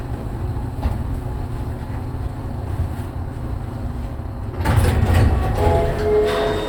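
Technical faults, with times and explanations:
No technical faults can be heard in this recording of sounds. Nothing in it needs a time or an explanation.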